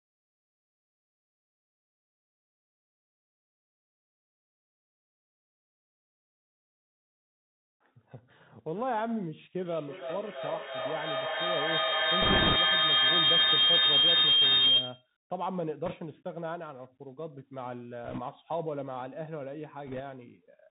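The whole recording passes through a Bluetooth CVSD headset codec, and the damage is plain to hear. The sound is cut off above 4 kHz, so it is narrowband and dull. The codec sends one bit per sample, meaning only up or down, with an adapting step size, which fits a 64 kbit/s CVSD stream. Loud high sounds outrun the step and distort. S sounds turn scratchy. A granular hiss sits under the speech.

At 9.62 s a feedback howl begins. It lasts until 15.13 s. A microphone and a loudspeaker on the same call are feeding each other, and each trip round the loop adds level. The repeats grow instead of fading. They narrow to a tone around 3 kHz, and the loop's delay is roughly a third of a second. At its peak it stands about 10 dB above the speech.

Bit errors on a Bluetooth voice link follow, at 12.22 to 12.56 s, 15.86 to 15.95 s, 18.04 to 18.20 s and 19.87 to 20.01 s. Bits were flipped on the headset link, at an error rate of a few percent that eases to below two percent in the last burst. 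Each bit carries only a small step, and its effect dies away. So there are no sharp clicks. Instead the speech picks up a rushing, crackly noise. The first burst falls inside the howl.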